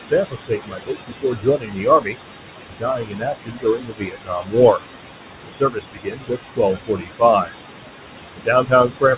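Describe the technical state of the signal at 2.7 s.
Speech cut by the noise suppressor, 2.6 to 4.57 s: the suppressor mistakes quieter speech for noise and pulls it down by up to about 22 dB, so parts of the passage sound swallowed and faint. Noise suppressor artifacts run through this moment as well, with background noise lowered by about 21 dB frame by frame, so it sinks between the words and rises under them.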